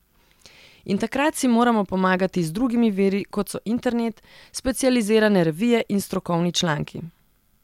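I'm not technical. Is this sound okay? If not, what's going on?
Yes, nothing stood out as a problem when listening to this recording.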